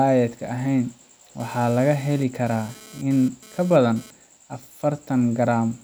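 A hard, raspy buzz cuts into this speech clip from 1.40 s to 4.11 s, pitched near 217 Hz, heavy in harmonics and sitting about 24 dB below the voice. It is GSM phone buzz: a nearby 2G handset transmitting in bursts during a data transfer, which the audio circuitry rectified into sound.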